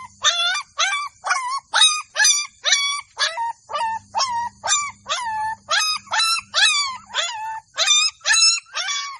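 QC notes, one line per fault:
Nothing stood out on listening.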